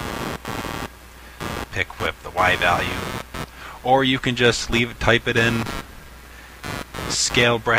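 Computer activity noise runs through the whole recording: a buzzing, chirping layer pulsing at roughly 100 times per second and sitting only about 10 dB below the wanted sound. Processor or graphics load is disturbing the shared ground, so the noise follows the machine's activity rather than the audio.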